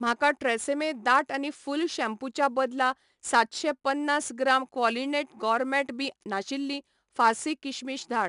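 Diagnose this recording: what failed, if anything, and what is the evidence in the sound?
The codec stage is the culprit: this speech has been through 4-bit ADPCM compression for its whole length. Every louder stretch carries a gritty hiss that rises and falls with the level, because each sample is coded as a coarse 4-bit step from a prediction. Sharp onsets get roughed up where the adaptive step can't grow fast enough. Nothing above 10.6 kHz survives, which fits a rate of about 89 kbps.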